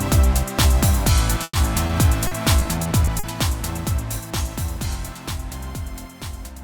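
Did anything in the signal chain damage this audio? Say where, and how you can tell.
Yes. A burst of packet loss hits the network stage at 1.43 to 1.55 s. About 100 ms of audio never arrived. The receiver extended the last sound and faded it, with about 30 ms going silent. Playback then resumes further on, and the 100 ms in between is gone.

A short concealed packet loss follows at 1.87 to 1.91 s, also on the network path. About 20 ms went missing. The decoder patched it by continuing the preceding sound and blending back in, so that moment smears briefly.

Repeated packet loss, the robotic-sound pattern, runs from 2.27 to 3.25 s. Six separate gaps fall in under a second, the longest 40 ms. Together they total 160 ms, about 16% of that stretch. Each gap is patched by continuing the last sound, which leaves the passage choppy.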